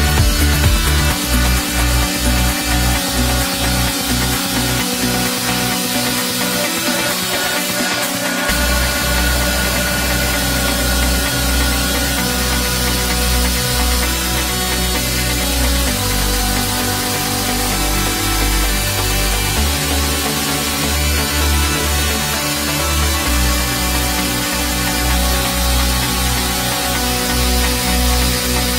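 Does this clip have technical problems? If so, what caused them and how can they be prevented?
No, no technical faults heard.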